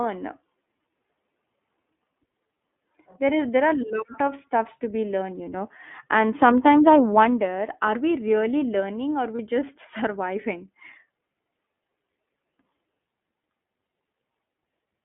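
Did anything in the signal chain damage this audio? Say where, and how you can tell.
Yes. The codec stage damaged it throughout. This is the iLBC codec. The speech sits in a narrow band from 200 Hz to 3.5 kHz. It has a plainly audible rough, synthetic edge. That suggests the 13.33 kbps mode with 30 ms frames, each coded on its own.

The network stage added a dropout. Lost iLBC frames cause a brief held, buzzy vowel from 9.36 to 9.40 s, just after "we really learning or". The decoder filled the gap by repeating the last pitch cycle with noise. This fits one lost 30 ms frame. The voice recovers at once.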